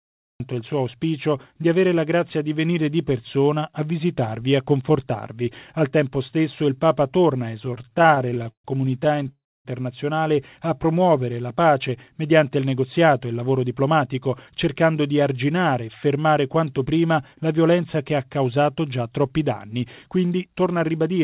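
The audio opens at 0.4 s with a cut-off start, beginning abruptly from digital silence mid-sound, with no natural attack. The recording began late.

From 7.67 to 9.32 s come repeated stalls (stutter). Packets kept arriving late, so the jitter buffer ran dry many times. Gaps up to 129 ms are filled by stretching the last sound, adding about 0.42 s. The passage drags and stutters.

A call audio freeze follows at 9.32 to 9.68 s. The sound holds briefly, then drops to silence for about 0.28 s before resuming where it stopped. Delayed packets likely emptied the buffer.

Jitter buffer speed-up runs from 12.77 to 14.67 s and again from 20.23 s to the end. The buffer had grown too full, so tiny slices were trimmed repeatedly. Roughly 150 ms and then 100 ms disappear. The sound runs 8% and then 10% fast at unchanged pitch, and feels hurried. Throughout, the call path leaves nothing above 4 kHz, which fits a narrowband telephone codec.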